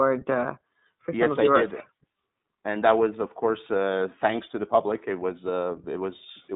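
From start to finish the speech carries the sound of the iLBC codec, a narrowband VoIP coder. The line passes roughly 150 Hz to 3.7 kHz, and nothing above 3.8 kHz survives, so the top end is gone. Each 30 ms frame's excitation is coded on its own, without reference to the previous frame, which fits the 13.33 kbps mode. The damage is plainly audible: the speech stays intelligible but sounds rough and slightly synthetic throughout.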